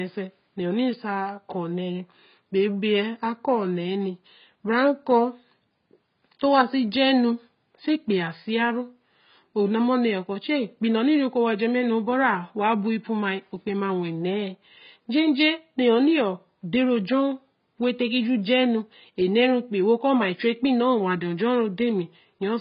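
Speech carries heavy AAC compression damage from start to finish, likely from AAC-LC at a low rate that fits about 16 kbps. Nothing sits above 5.1 kHz, so a spectrogram shows a hard, flat ceiling there, and the sound comes across dull and smeared.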